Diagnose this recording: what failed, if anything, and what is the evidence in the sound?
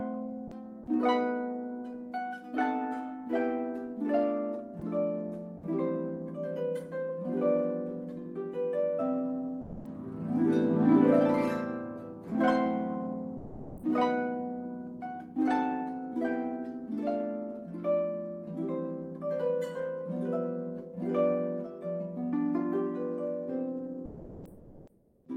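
Two short holes point to sound dropped by the voice detector, a codec-stage fault. At 9.61 s the audio gives way to flat noise for 240 ms, and at 13.39 s it does the same for about 360 ms before the real signal snaps back. The encoder's detector misjudged live sound as background and stopped sending, likely Opus DTX, so the receiver filled the gap with synthetic noise until the detector fired again.

From 24.07 s to 25.21 s, comfort noise replaces the background. The real room sound, which sits about 27 dB below the loud parts, is swapped for a smooth, featureless hiss about 4 dB quieter, lasting 1.14 s. This also happens at the codec: during the pause the sender went into discontinuous transmission, likely Opus DTX, and the far end generated noise roughly matching the background's shape instead of playing the real thing.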